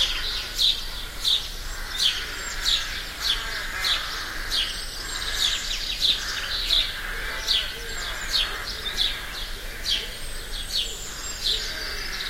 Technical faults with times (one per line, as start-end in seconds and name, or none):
9.95-10.78 GSM phone buzz